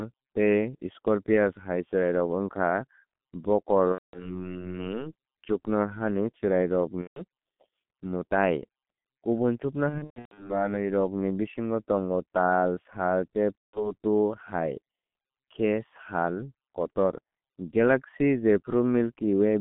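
Throughout, the G.723.1 codec at 6.3 kbit/s confines the speech to about 150 Hz to 3.5 kHz, sounding muffled and hoarse. The spectrogram shows nothing above 3.5 kHz and smeared consonants.

VoIP packet loss concealed by the speech codec occurs at 3.93–4.43 s, 7.02–7.22 s, 9.89–10.67 s (scattered gaps, longest about 120 ms) and 13.68–13.94 s. In each, the decoder stretches its last pitch and filter into a fading buzzy tone or coloured noise. These show as repeated, blurred spectral patterns and a tapering waveform envelope.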